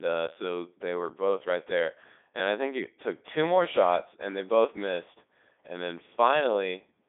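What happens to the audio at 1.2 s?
At 1.2 s the speech sounds robotic and buzzy, as it does throughout: a Codec 2 vocoder rebuilds it from sine waves. It runs at 3.2 kbit/s, within a narrow band of 250 Hz to 3.6 kHz.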